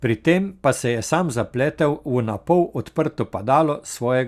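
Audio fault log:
No audible faults detected.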